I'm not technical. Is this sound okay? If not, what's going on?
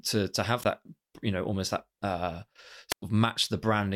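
No. This is a wireless microphone squelch dropout: the radio link weakened and the receiver briefly shut off the sound. You hear a short hiss, then a gap, at 0.60 to 0.66 s (about 16 ms silent) and again at 2.90 to 3.02 s (about 100 ms).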